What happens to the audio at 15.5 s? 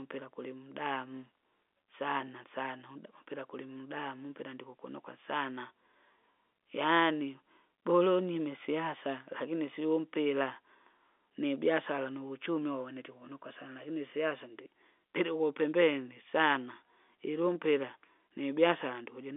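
Nothing goes wrong at 15.5 s: the speech continues intact through that moment, carried in the same narrow telephone band as the rest of the line, with nothing above about 3.7 kHz.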